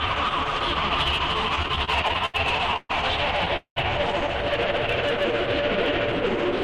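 From 1.55 to 2.36 s there are repeated stalls (stutter): the jitter buffer ran empty ten times as packets arrived late, with the longest wait 80 ms. The receiver stretched the last sound across about 203 ms, a quarter of that span, so the audio drags and stutters while nothing is lost.

Two call audio freezes follow, likely from packets held up in transit. At 2.76 to 2.91 s, 128 ms of continued sound ends in roughly 20 ms of silence. At 3.56 to 3.78 s, 197 ms is filled, the last 100 ms silent. Each time the sound then resumes where it stopped, delayed rather than cut.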